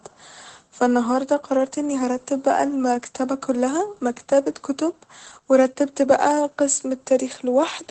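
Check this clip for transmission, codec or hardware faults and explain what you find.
One codec fault runs through the whole clip: Opus voice compression at a low bitrate. The speech passes through the SILK linear-prediction coder at a rate that sounds close to 12 kbps. It models the vocal tract and codes the excitation coarsely, and the wideband setting discards everything above about 8.7 kHz. The result is plainly audible: the speech sounds muffled and lacks air, with a hoarse, slightly robotic edge.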